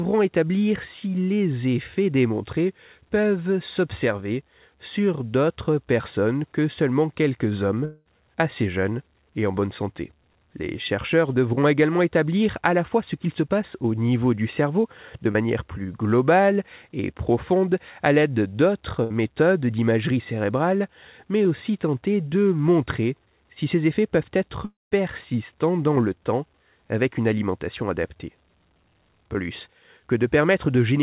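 At 7.85 s, after "que seulement quelques hommes", the speech breaks off until 8.08 s, likely a long network dropout. About 210 ms of audio never arrives. For roughly 200 ms the receiver stretches the last sound into a decaying buzz or hiss, which leaves about 30 ms of near-silence before the audio resumes on "assez jeunes et en". The words in the gap are skipped, not delayed. Like everything else in the clip, the fill is confined below 4 kHz, the band limit of a G.711 A-law call path at 64 kbps.

At 15.31 s, between "niveau du cerveau de" and "plus globale et profonde", there is a short concealed packet loss. About 30 ms is missing and is covered by a 32 ms extrapolation of the preceding sound, which then blends back into the real signal. It comes across as a brief smear or wobble lasting about 60 ms.

From 19.04 to 19.13 s, a burst of packet loss removes about 60 ms in a row. The receiver extends the last sound for about 63 ms and turns it down as it goes. 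A voiced sound becomes a short held buzz and an unvoiced one a fading hiss, and the audio then picks up further along with that stretch gone.

At 24.65 s, after "si ces effets peuvent", a second gap runs to 24.94 s, likely another long network dropout. About 270 ms is lost. Roughly 260 ms of fading continuation covers it, and about 180 ms of that is effectively silent before the speech returns.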